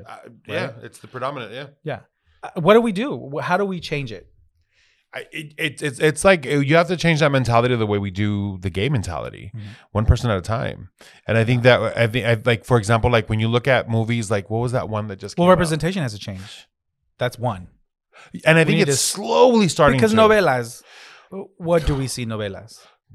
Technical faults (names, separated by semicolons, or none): none